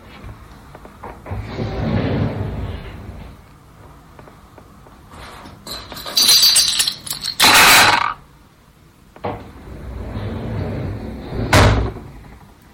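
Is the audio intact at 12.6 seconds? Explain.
Yes, the audio is intact at 12.6 seconds, with only the light lossy compression that runs through the whole clip and no fault at that point.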